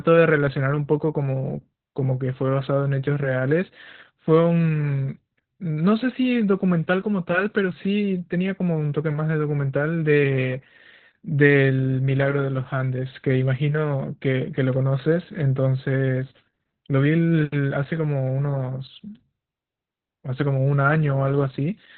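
Opus voice compression runs through the whole speech clip, with the coder working in its SILK linear-prediction mode at a starved rate; the heavy damage points to a bitrate of around 8 kbps. At that rate it drops to narrowband and codes the excitation coarsely, so nothing survives above about 4.2 kHz. The speech sounds muffled and telephone-like, with a hoarse, slightly robotic edge where the coarse excitation stands in for the natural voice source.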